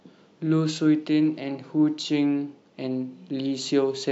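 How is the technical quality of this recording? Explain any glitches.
No audible technical faults.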